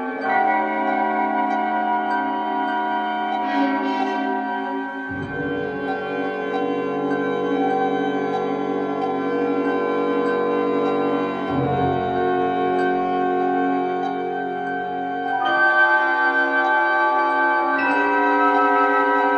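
No dropouts, clicks, distortion or level jumps turn up anywhere in the audio, so there is nothing to flag.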